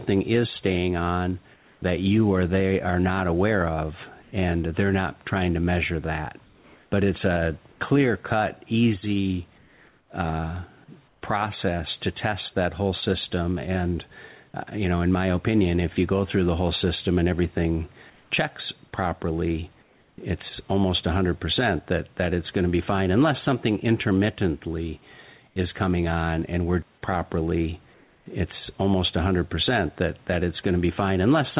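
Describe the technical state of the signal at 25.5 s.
From 25.48 to 25.56 s, the real room background drops out for 80 ms and is replaced by comfort noise, a smoother noise about 4 dB quieter, likely from the sender's voice detector pausing transmission. Underneath, gain pumping swings the gain by roughly 5 dB, likely a fast limiter riding an over-high mic gain.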